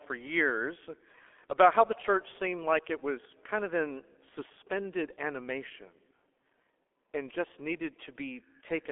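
Muffled, hoarse speech with smeared consonants runs through the whole clip, with nothing audible above about 3.7 kHz and the band confined to roughly 300 Hz to 3.4 kHz. That is heavy damage from the G.723.1 codec, an early internet-telephony coder that rebuilds the voice from a simple model refreshed only every 30 ms frame, at a rate that fits about 6.3 kbit/s, so fast detail blurs and the upper band is lost.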